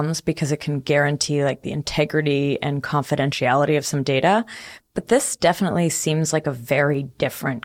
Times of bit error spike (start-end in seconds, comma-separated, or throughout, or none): 2.10, 6.94